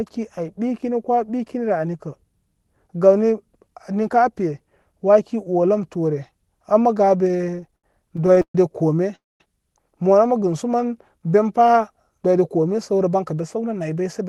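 From 7.28 to 8.55 s the speech shows repeated stalls (stutter). The jitter buffer kept running dry, and it was bridged with continued sound sixteen times, the longest gap 128 ms, so the audio drags and judders. At 9.15 s a call audio freeze holds the sound for about 245 ms, mostly silent, before it resumes at 9.41 s. It was likely caused by packets delayed in transit. From 12.09 s to the end, a jitter buffer speed-up trims short pitch-period pieces, around 150 ms in all. That runs the speech about 8% fast at unchanged pitch, so it sounds hurried.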